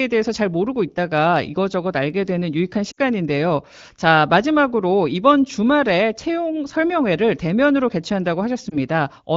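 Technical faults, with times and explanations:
2.91–2.99 s, lost AMR speech frames: the speech softens and drops to near silence for about 60 ms, the length of three 20 ms frames, before the voice returns, weak or rough for a moment. With the frames missing, the wideband decoder kept repeating the last good pitch and vocal tract settings while lowering the gain, so the sound fades to near silence within two frames before real data returns.
8.69–8.77 s, lost AMR speech frames: a quick dip or warble lasting about 20 ms, one frame's worth, where the decoder filled the gap with a faded copy of the preceding sound.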